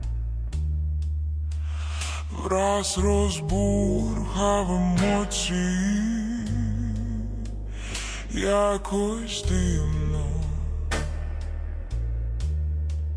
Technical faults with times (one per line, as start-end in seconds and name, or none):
0.00-13.17 wrong sample rate